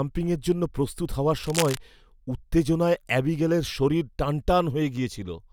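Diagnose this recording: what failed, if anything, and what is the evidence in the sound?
A burst of harsh scratching and rustling runs over the speech from 1.43 to 1.78 s, dense and uneven, and only a little quieter than the speech itself. That is cable scratch noise, and it points to the analogue wiring stage. The likely cause is a worn cable, connector or control being moved: its contact resistance fluctuated rapidly for about a third of a second, modulating the signal with these ragged noise bursts.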